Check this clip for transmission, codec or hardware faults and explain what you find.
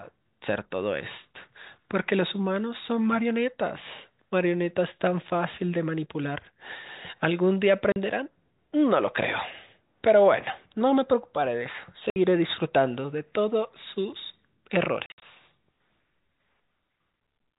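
The speech has three dropouts caused by packet loss filled with silence. Over the telephone band, which stops at 4 kHz as G.711 telephone coding does, you can hear them at 7.92–7.96 s (40 ms), 12.10–12.16 s (60 ms) and 15.06–15.22 s. In that last stretch, 120 ms goes missing in pieces spread across 160 ms, and the longest single gap is 60 ms. The receiver played silence where packets never arrived. The gap lengths fit 20 ms packets. Each hole cuts the speech off abruptly. On a waveform the holes appear as flat lines. On a spectrogram they are blank vertical bands with thin broadband streaks at their edges.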